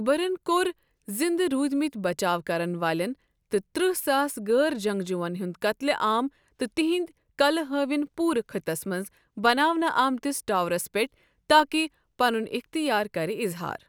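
Listening closely to the speech, nothing stood out as a technical fault at any point.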